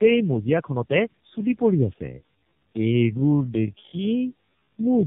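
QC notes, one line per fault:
Throughout: tandem speech coding. The audio sounds rough, muffled and warbly. Each stage adds its own grit on top of the previous one's damage, which fits about three low-bitrate speech coders in a row. Something like AMR-NB near 8 kbit/s into a G.723.1-type coder and back again would do it, with plain telephone links between them. Each re-encode works on already degraded audio, so the artefacts pile up.
2.07 s to the end: time-stretched section. At 2.07 s the pace abruptly drops to roughly half speed (about 0.55×), but the pitch stays where it was. It drags, with syllables drawn out. This is likely software stretching to fill a length, keeping pitch steady by repeating short slices.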